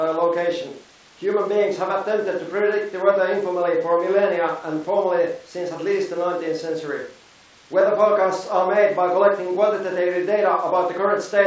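Speech with no technical faults; the band stops at 8 kHz, consistent with a G.722 wideband call path working as intended.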